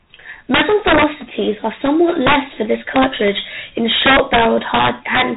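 G.726 ADPCM runs from the start of this speech clip to the end. Each sample is sent as a coarse difference from an adaptive prediction, and with so few bits per step the quantisation error is plainly audible. It comes through as a harsh, rasping hiss that rises and falls with the speech level, a texture that fits 24 kbit/s coding. Nothing above 3.8 kHz survives, so the sound is narrow and telephone-like.

Integer overflow strikes at 0.54–1.04 s, 1.86–1.88 s, 2.27–2.36 s (just before "for this"), 2.96–3.28 s (just after "for this"), and 3.92–5.22 s. Loud peaks exceed the integer limit by about 1 to 5 dB and, instead of being held at the limit, wrap around to the opposite extreme. Each wrap is a full-scale jump, heard as violent, sharp cracks on the loudest moments, far harsher than ordinary clipping.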